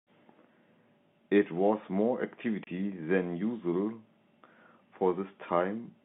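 Speech over a G.711 telephone line, band-limited to roughly 150 Hz to 3.5 kHz, with one instance of packet loss filled with silence between 2.64 and 2.67 s. A single 30 ms stretch drops straight to nothing, which fits one lost packet replaced by silence. On the waveform this is a flat gap with sharp walls. On a spectrogram it appears as a thin blank column.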